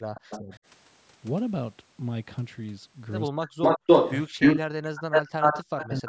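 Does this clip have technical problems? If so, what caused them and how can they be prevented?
Yes. Speech suppressed in double talk occurs at 0.00–0.51, 3.31–3.84, 4.28–4.72 and 5.85–6.08 s. The speech dips by roughly 35–40 dB, likely because an echo canceller turned everything down while both sides talked. The waveform shows deep notches, and the spectrogram shows faded gaps. Headsets and full-duplex echo-cancellation tuning prevent it.

An echo leak appears at 0.15–0.59 s as a copy delayed by 161 ms and about 10 dB below the speech. It returns at 3.62–4.59 and 4.95–6.08 s with a 277 ms delay, about 15 and 10 dB above the speech. This is likely loudspeaker sound escaping the loudspeaker side's canceller. The spectrogram shows the same patterns repeated, offset in time. Headphones prevent it.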